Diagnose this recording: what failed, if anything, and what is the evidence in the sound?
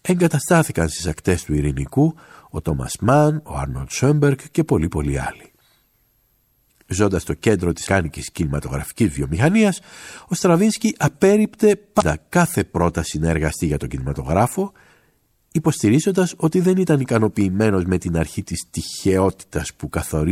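Codec stage: damaged data in a compressed stream, heard as brief disruptions at 7.83–7.87 s and 11.98–12.03 s, where corrupted frames break decoder sync until it finds the next frame.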